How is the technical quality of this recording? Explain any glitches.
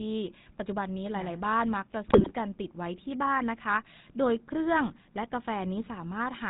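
The quality is poor: the whole clip carries codec damage, and there is a short burst of corruption.

Throughout, the speech has passed through the GSM full-rate codec; its coarse pulse excitation, consistent with 13 kbps coding, leaves the voice buzzy and gravelly, with nothing above 4 kHz.

From 2.08 to 2.33 s, GSM bit errors corrupted the decoder's filter, pitch and gain values across roughly a dozen frames, so the speech breaks into squawks, pops and gargling.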